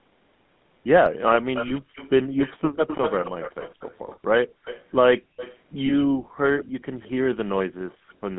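Speech carried over a GSM full-rate codec at 13 kbps, with the line band limited to roughly 150 Hz to 3.6 kHz. The codec's pulse-driven vocal-tract model leaves a plainly audible buzzy, gravelly roughness throughout, and nothing above the band survives.

From 1.54 to 7.1 s a delayed copy of the voice trails the speech by about 232 ms at around 10 dB below it. A second, very faint copy at 7.88–7.96 s lags by 167 ms. This echo leak is likely a loudspeaker-side echo canceller letting residual playback through.

Lost GSM frames occur at 1.68–1.72 s and 5.86–5.93 s, each a single 20 ms gap. The decoder repeats the last good frame's settings, giving a brief rough, metallic ring instead of a clean dropout.

Background gated by the echo canceller appears at 4.47–4.64 s, 5.19–5.36 s and 6.11–6.4 s. The canceller clamped the microphone by up to about 40 dB, so room sound drops out for roughly 150 to 300 ms before returning.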